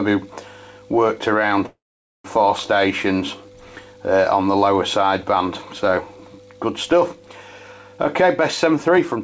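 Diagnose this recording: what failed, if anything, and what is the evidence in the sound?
At the network and jitter-buffer stage, delayed packets likely left the buffer empty, causing a call audio freeze. From 1.66 to 2.26 s the last sound trails into a fading buzz or hiss, then 480 ms of silence, before resuming where it stopped, pushed 585 ms later.

A jitter buffer speed-up in call processing follows. Holding surplus delay, the receiver repeatedly cuts pitch-period-sized slices from 7.98 to 9.20 s, so the audio runs at 117% speed with unchanged pitch and sounds hurried, shedding roughly a fifth of a second.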